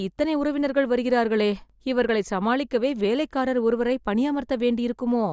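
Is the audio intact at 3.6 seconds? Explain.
Yes, the speech at 3.6 seconds plays through intact, with no dropout, click, distortion or other fault at that moment.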